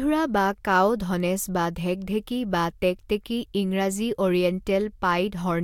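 No technical faults can be heard anywhere in this speech recording; the signal stays continuous and intact throughout.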